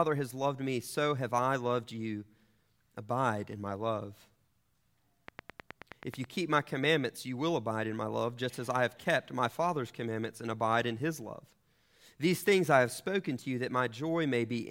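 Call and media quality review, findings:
Train of clicks, 5.28 to 6.25 s, ending just before "keep my commandments you". Regular ticking at about 9.4 per second, roughly ten similar pops, peaking about 10 dB above the speech. Likely cause: interference coupling into the capture chain or a faulty connection or power supply injecting periodic pulses.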